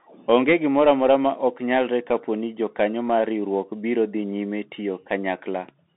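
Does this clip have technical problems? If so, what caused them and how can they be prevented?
Yes. Throughout the speech the sound is thin and boxed-in, confined to roughly 200 Hz to 3.7 kHz with nothing above 3.9 kHz. The s sounds turn scratchy and a granular hiss runs underneath. This is the Bluetooth CVSD headset codec, which fits a 64 kbps stream. It sends one bit per sample saying only up or down, with an adapting step size, so loud high content outruns the step and distorts. To prevent this, record through a wired or high-quality microphone, or use a Bluetooth link running a wideband codec instead of the headset profile.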